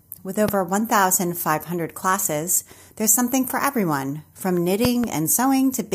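A loud pop at 0.48 to 0.51 s, then a double pop at 4.85 to 5.06 s, each roughly 15 dB above the speech, which continues underneath. A sudden voltage step, likely from a plug, switch or static discharge, is shaped into sharp thumps.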